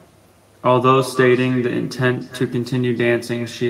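Throughout, echo with no canceller: the far end's loudspeaker feeds its microphone, returning each phrase roughly a third of a second later, about 16 dB quieter. Spectrograms show faint delayed duplicates.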